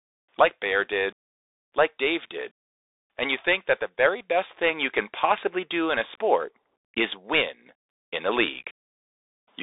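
From start to finish the speech runs through a Bluetooth CVSD headset codec. It's squeezed into roughly 250 Hz to 3.7 kHz with nothing above 3.8 kHz, and the one-bit slope coding, which fits a 64 kbps link, leaves plainly audible grainy hiss and scratchy sibilants.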